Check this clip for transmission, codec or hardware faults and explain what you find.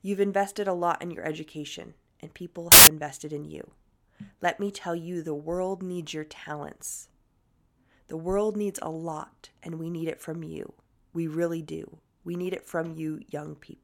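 One fault turns up in this speech clip: samples built from the wrong bytes, from 2.72 to 2.87 s, just after "your education and people" and before "invested in you". For about 0.15 s the reader joins each sample's bytes wrongly, so the fast-changing low bits land in the most significant position. What should be speech becomes a burst of loud, harsh broadband noise. A codec dropout would go quiet or smear instead, while this hiss is full-band and harsh.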